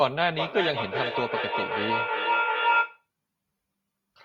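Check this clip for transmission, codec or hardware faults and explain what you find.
There's one clear problem here: feedback echo between two devices, running from 0.39 s to 3.07 s. Two devices in the same room are on the call, and each mic picks up the other's loudspeaker. Neither echo canceller touches sound its own device didn't play, so the speech loops round roughly every 0.4 s. The loop gets loud enough that the repeats build up to about 1 dB above the speech itself, thinning and ringing more with each pass.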